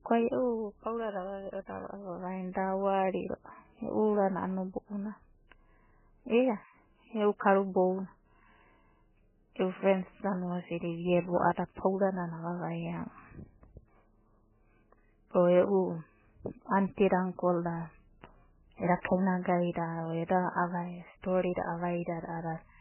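From start to finish, the speech has its treble cut and a heavy watery, swirling texture, with sibilants breaking into metallic chirps and consonant onsets smeared. The likely cause is MP3 compression at a very low bitrate, around 8 kbps. Starved of bits, the encoder drops all treble above a fixed cut-off and discards weaker spectral lines, which flicker on and off between frames and produce the warbling.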